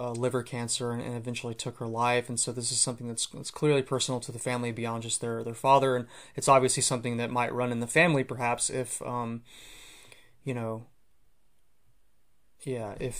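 No dropouts, distortion, glitches or other technical faults turn up anywhere in the recording.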